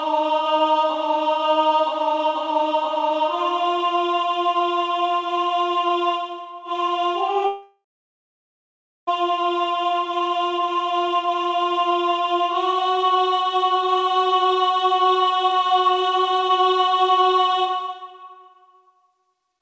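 From 7.46 s to 9.09 s the audio smears into a fading buzz, then sits near-silent for about 1.2 s before resuming with a section gone, likely a long network dropout. The clip comes through a call path with nothing above 8 kHz, which fits G.722 at 64 kbps.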